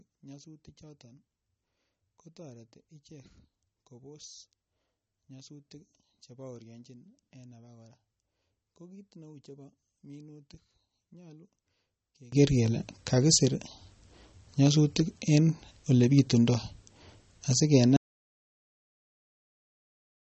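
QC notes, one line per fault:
Throughout, MP3 compression: the speech sounds watery and swirly, with nothing above about 8.3 kHz and chirpy, smeared s sounds. The damage is plainly audible, which fits a low bitrate around 32 kbps, likely an encoder starving for bits and zeroing weak frequency lines frame to frame.
0.00 to 12.32 s, one channel inverted: summed to mono, the voice drops by about 27 dB and what's left is a faint ghost until just before "kele kakisir". Likely one side has flipped polarity, so everything shared between the channels cancels out.
17.97 s to the end, audio dropout to silence: the sound cuts off mid-flow and never returns, leaving silence with no room tone at all. Likely the input was lost while the recorder kept writing silence, so that last stretch is simply gone.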